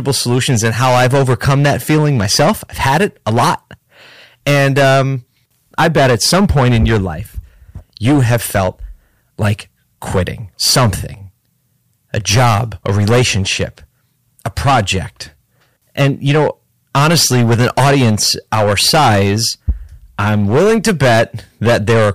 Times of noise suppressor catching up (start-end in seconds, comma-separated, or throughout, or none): none